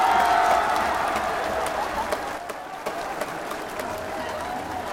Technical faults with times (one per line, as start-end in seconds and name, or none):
2.38-2.87 one channel drops out